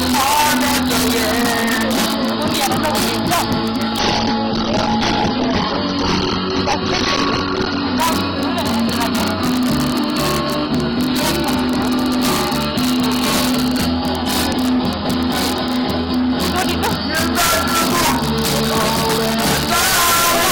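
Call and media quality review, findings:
Integer overflow, throughout: harsh cracks on loud peaks, far sharper than clipping. Gain stage runs about 2 dB hot; a small fraction of peaks exceed the integer maximum and wrap to the opposite sign instead of being limited. Probable component: mixer/gain arithmetic lacking saturation.

Adaptive stream at a lower bitrate, 3.99 to 7.99 s: sudden quality drop with no gap; nothing above 6.4 kHz, treble dull, codec artefacts rising. Sound points to the player switching from a high-rate AAC rendition to a low-rate one, consistent with 24 kbit/s, during a connection slowdown.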